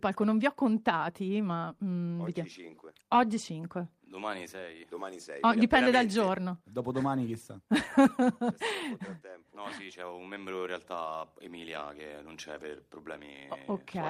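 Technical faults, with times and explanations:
No technical faults can be heard anywhere in this clip.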